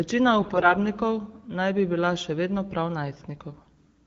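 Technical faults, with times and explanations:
0.42 to 0.74 s and 3.49 to 3.66 s: AMR bit errors. Flipped low-priority bits, around 7 percent, misplace excitation pulses and skew gain and spectrum values. The sound turns hoarse and gargly at roughly its normal pitch and level, not silent or repeated as with frame loss.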